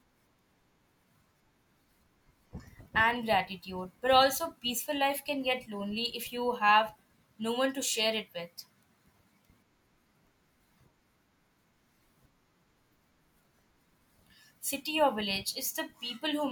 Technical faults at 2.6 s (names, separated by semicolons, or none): none